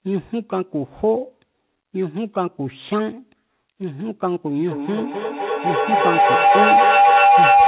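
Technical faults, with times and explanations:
4.64 to 7.68 s, feedback howl: two devices in the same room joined the call, so the loudspeaker's output re-entered the microphone and gained level on each trip around the loop. The repeats build instead of dying away, narrowing to a tone of around 700 Hz, with the loop's delay roughly 300 ms. It peaks about 9 dB above the speech and runs to the end, confined below 4 kHz like the narrowband call audio.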